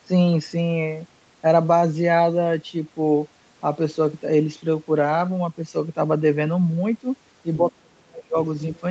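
Speech suppressed in double talk, from 7.6 to 8.38 s: the speech drops deeply, roughly 35 dB at worst, likely because the echo canceller turned down both sides while both talked. The other side's voice leaking through, at 8.75 to 8.8 s: a brief, faint scrap, around 30 dB below the speech, likely echo the canceller left in the microphone signal.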